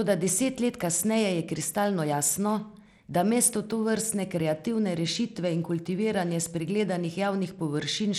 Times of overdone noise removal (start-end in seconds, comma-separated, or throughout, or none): none